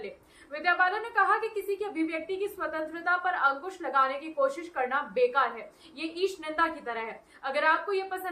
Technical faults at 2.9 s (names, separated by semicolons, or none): none